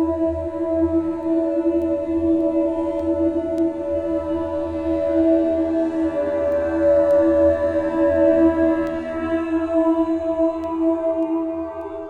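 From 0.64 s to 11.81 s, word clock ticks recur about every half second, roughly twenty in all. The receiving clock drifts against the sender's by a few tens of parts per million, so each slip of what sounds like one sample leaves a sharp tick. Unlike random clicks, they keep a steady rhythm.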